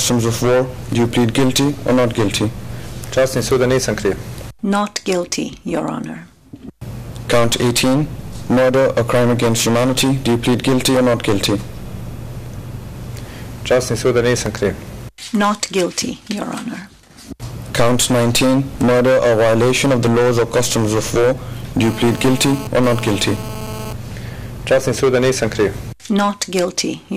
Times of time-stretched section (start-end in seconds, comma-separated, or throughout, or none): none